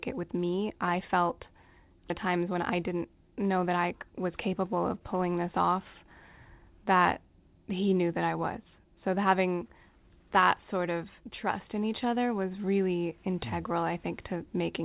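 At 2.10 to 2.12 s the speech shows a skip ahead. Roughly 0.4 s of audio is simply gone, dropped before playout while later audio was already queued, and nothing fills the gap. The two sides meet almost directly, so the speech lurches forward mid-flow with a small seam instead of a pause, and the listener's timing is cut short by about that same amount.

From 2.26 to 4.11 s comes a jitter buffer speed-up. With more audio held than the target delay, the receiver trims short slices, each one or a few pitch periods long, over and over, removing around a fifth of a second in total. Playback runs at about 111% speed while pitch stays put, so the speech sounds rushed through that stretch. Throughout, the band stops at 4 kHz, which fits narrowband G.711 A-law.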